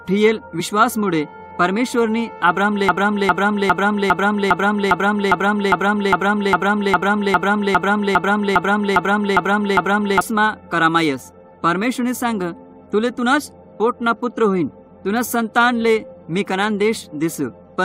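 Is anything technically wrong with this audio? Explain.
Yes, two faults are audible.

At 0.59 s the audio jumps ahead by about 20 ms. These are compressed frames skipped: whole frames were missing or rejected as damaged.

From 2.89 s to 10.21 s, a 0.41 s fragment repeats exactly, back to back, 18 times, and the audio that belonged there never plays. This broken-record loop likely comes from a stalled player, encoder or stream resending the last fragment it held.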